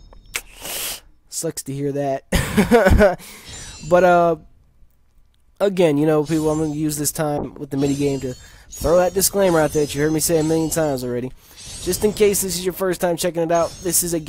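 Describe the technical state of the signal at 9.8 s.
Muffled, rough and watery, with the highs cut away: a call bitrate drop spanning 7.38 to 11.85 s, as the encoder fell from 96 to 21 kbps.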